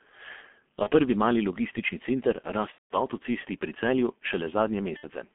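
Throughout the clip the speech sounds muffled and hoarse, with smeared consonants and nothing below 200 Hz or above 3.4 kHz. This is the G.723.1 codec at heavy damage. Its coarse 30 ms frames and slow voice model fit a bitrate around 6.3 kbit/s.

At 0.83 to 0.90 s, just before "prvi mali logistični center", the sound briefly stretches into a buzzy tone or coloured noise that fades. At 2.72 to 2.96 s, between "prvi mali logistični center" and "avtocesti pri", the same thing starts, but from the third lost frame it is muted. At 4.97 to 5.04 s it happens again briefly. Each is VoIP packet loss concealed by the speech codec. The decoder repeated its last pitch and filter at falling gain over gaps of about 30, 180 and 60 ms. The speech stays weak or distorted a moment after each gap.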